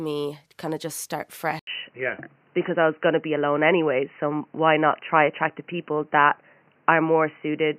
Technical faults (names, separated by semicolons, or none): input switched to a poorer device